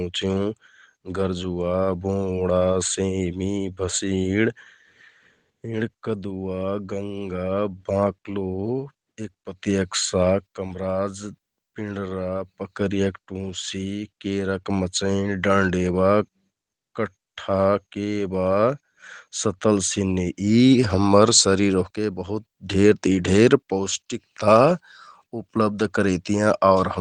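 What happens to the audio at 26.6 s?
Nothing goes wrong at 26.6 s; the audio there runs on intact, with no dropout, glitch or other fault.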